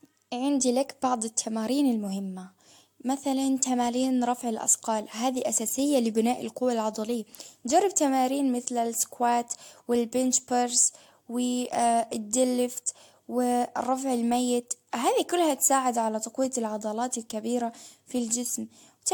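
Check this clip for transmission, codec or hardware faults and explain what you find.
The clip shows one fault, present from start to finish: generation loss. The speech was likely passed through a lossy AAC-LC encoder several times, perhaps three, at a rate consistent with about 96 kbit/s. Each re-encode quantises again on a shifted frame grid, so coding noise and spectral gaps build up. Nothing is present above 19.3 kHz, and the speech sounds swirly, smeared and hollow beyond what that rate alone would cause, with consonant attacks blurred.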